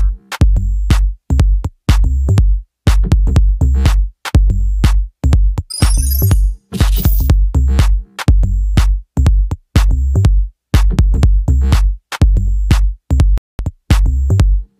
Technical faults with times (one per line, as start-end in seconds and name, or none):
13.38-13.59 Bluetooth stall